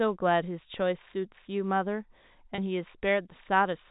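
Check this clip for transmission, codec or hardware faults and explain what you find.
One transmission fault occurs, a single brief dropout in the speech. The telephone-band coding can be heard as sound capped at 4 kHz.

Packet loss with pitch repetition occurs at 2.55 to 2.58 s. About 30 ms of audio went missing, which fits one lost packet. The receiver filled the gap by repeating the last pitch cycle. It sounds like a slightly held, buzzy note.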